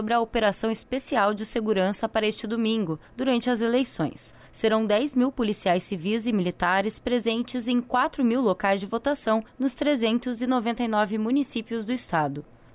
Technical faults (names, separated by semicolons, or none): none